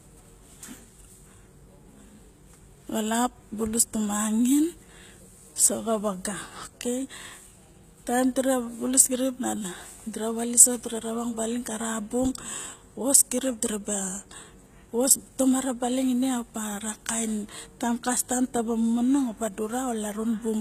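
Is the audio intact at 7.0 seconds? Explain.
No. HE-AAC compression affects the whole clip, including 7.0 seconds. The speech is likely HE-AAC coded at a very low rate, around 20 kbps: the treble is rebuilt from copied lower bands, so s sounds turn gritty and metallic, with nothing above 14.9 kHz.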